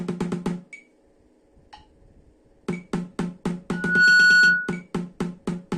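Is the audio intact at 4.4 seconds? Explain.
No. At 4.4 seconds a piercing 1.5 kHz loudspeaker feedback squeal swells within about a third of a second to roughly 15 dB above the sound, lasting from 3.72 to 4.82 s. A microphone is picking up its own loudspeaker, and the loop gain exceeds one at that pitch.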